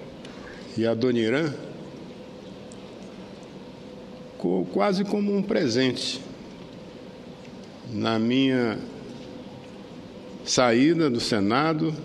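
No technical faults can be heard anywhere in the audio, and the signal stays intact and steady throughout.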